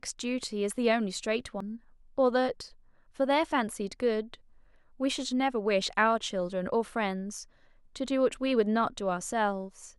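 The decoder is skipping compressed frames, either lost from the file or rejected as damaged. At 1.60–1.63 s the speech jumps ahead by about a tenth of a second, and at 3.49–3.52 s by a much smaller sliver.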